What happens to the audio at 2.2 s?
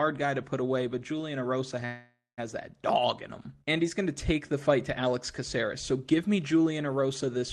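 A call audio freeze runs from 1.85 to 2.40 s, so 2.2 s falls inside it. The audio stalls and the last sound is carried on as a buzzy or hissy, fading continuation that dies away, with about 200 ms of that stretch fully silent. The likely cause is packets held up in transit until the jitter buffer ran dry. When the audio resumes it picks up where it stopped, nothing lost, but everything after is pushed about 0.52 s later.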